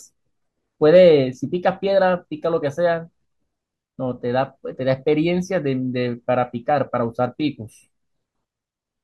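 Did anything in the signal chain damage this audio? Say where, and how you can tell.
No, nothing in the chain damaged this speech.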